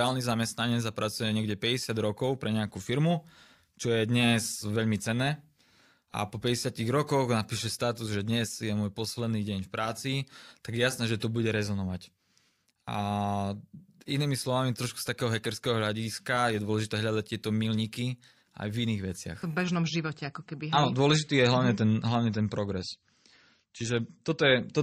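At 19.64 s the speech abruptly loses treble above 8.4 kHz and turns swirly: an adaptive stream at a lower bitrate, seamless, unlike a dropout or reconnect.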